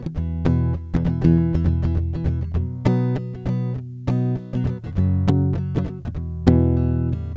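Listening closely to this music clip, nothing stood out as a technical fault at any point.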